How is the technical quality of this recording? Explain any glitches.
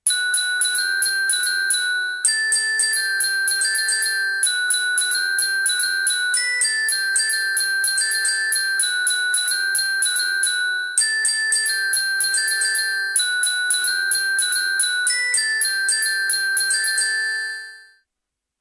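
Listening closely to this recording of sounds, nothing stood out as a technical problem.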